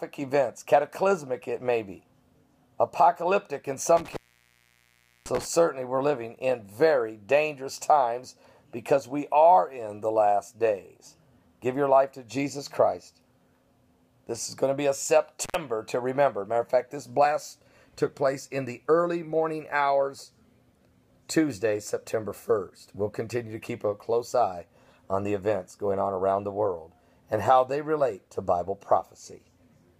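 The audio has two dropouts from an intermittent contact, where a loose cable or plug briefly breaks the signal path. Between 3.97 and 5.46 s the line stays open for about 1.10 s, and at 15.44 to 15.55 s for 84 ms. Each gap opens and closes with crackle, leaving faint hiss. A waveform shows the signal collapsing to near-flat, and a spectrogram shows vertical broadband streaks at the edges around a dark band.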